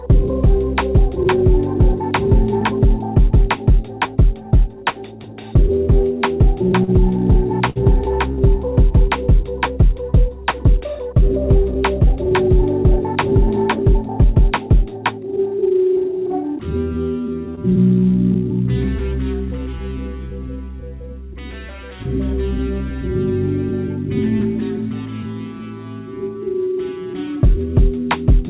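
Short stalls from a late packet occur at 6.84, 7.70 and 8.32 s. Each time the jitter buffer ran dry, so the last sound is held for 37, 60 and 60 ms with a faint buzz or dip before resuming.

Jitter buffer speed-up runs from 12.10 to 14.25 s. The receiver trimmed tiny pitch-period slices, cutting only a few hundredths of a second, so the audio runs at 101% speed with unchanged pitch.

Short concealed packet loss at 17.55 s. About 20 ms never arrived, and the receiver extended the preceding sound to bridge it, leaving a brief smear or wobble.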